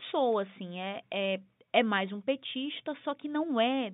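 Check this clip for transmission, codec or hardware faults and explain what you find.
Nothing stood out on listening to this telephone-band speech.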